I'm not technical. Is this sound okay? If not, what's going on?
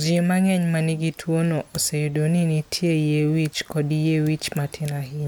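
Yes, this speech recording sounds fine, with nothing going wrong anywhere in it, so there's nothing you need to worry about.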